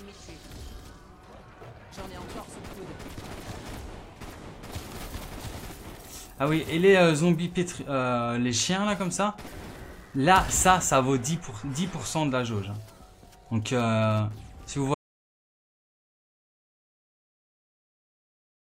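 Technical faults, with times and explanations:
14.94–18.70 s, audio dropout to silence: at 14.94 s the sound cuts off abruptly mid-flow and never returns, leaving about 3.8 seconds of silence through to the end, with no room tone or background hiss at all. That total absence points to the input signal being lost while recording carried on writing silence, likely through a disconnected device, a failed link or an accidental mute, so whatever followed is missing.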